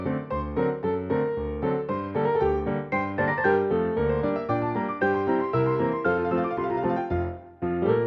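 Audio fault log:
No faults are logged for this clip. Nothing in the audio calls for an entry.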